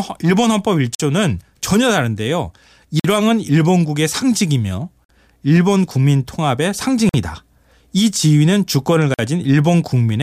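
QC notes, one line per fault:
0.95 s, 3.00 s, 5.04 s, 7.09 s, 9.14 s, gap between chunks: the speech stops dead five times for about 48 ms each. The holes recur every 2.05 s or so, which fits 2-second chunks with a short silence inserted at each join. Nothing is cut away, since the speech resumes where it stopped, but each junction leaves an audible hole, probably from codec padding or late chunk starts.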